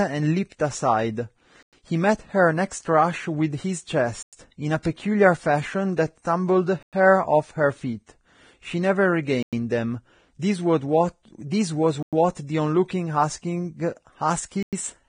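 Speech runs throughout with a hard ceiling at 9.7 kHz and a grainy, hissy treble that roughens the voice, most likely from heavy Vorbis compression at a low bitrate around 23 kbps. On a spectrogram the top band stops abruptly and the upper frequencies appear as speckled noise instead of clean harmonics. A gap between chunks silences the audio for 100 ms at 1.63, 4.23, 6.83, 9.43, 12.03 and 14.63 s. These clean-edged holes recur every 2.6 s, which fits 2.5-second chunks joined with silence. The waveform drops to silence with sharp edges each time, and the spectrogram shows matching vertical blank stripes. Pre-echo puts a short hiss just ahead of attacks from 4.83 to 4.85 s (22 ms) and at 5.96 s (13 ms). The codec spreads quantisation noise across a whole transform block, so the noise arrives early, visible as a smear of energy before each onset.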